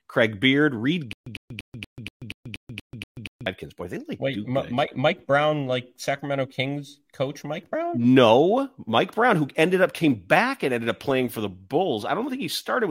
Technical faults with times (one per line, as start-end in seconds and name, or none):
1.13-3.46 stutter with silent gaps